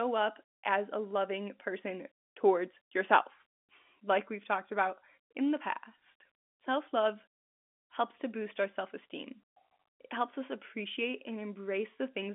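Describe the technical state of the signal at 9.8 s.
At 9.8 s the audio is intact and no fault is present; the speech carries the band of G.711 telephone coding, with nothing heard above 3.7 kHz.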